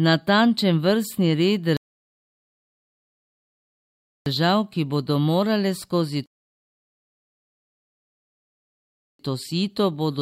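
Speech with two rebuffering stalls: the player runs dry and goes silent from 1.77 to 4.26 s and again from 6.26 to 9.19 s, then picks up right where it stopped, adding about 2.5 s and 2.9 s.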